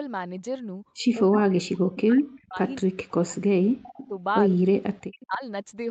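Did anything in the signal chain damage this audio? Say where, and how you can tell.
Yes. Speech suppressed in double talk: the speech drops by roughly 40 dB at 1.21–2.59, 2.81–4.14 and 4.85–5.42 s, likely echo-canceller ducking in call processing. The waveform shows deep notches and the spectrogram blank gaps.

Echo leak, also in call processing: at 3.98–4.08 s a copy about 20 dB down arrives 209 ms late, likely residual loudspeaker echo. The spectrogram shows faint, time-shifted harmonic traces.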